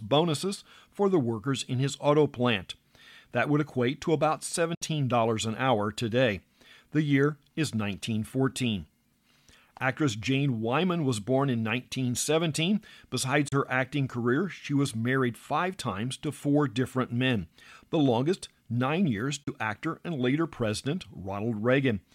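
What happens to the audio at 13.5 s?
A digital broadcast dropout: the receiver lost data and muted. From 13.48 to 13.53 s the speech fades over 8 ms into a 32 ms hole, which fits a single lost frame, just before "her acting career she".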